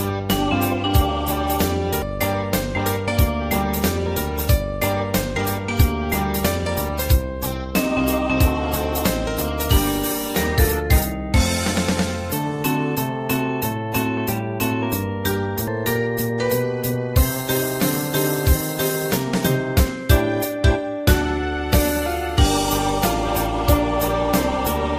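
Damaged data in a compressed stream breaks the audio at 2.02 s and again at 15.68 s, each a brief chirp or blip. Corrupted bytes made the decoder misread frames there, lose sync and hunt for the next valid frame header before resuming.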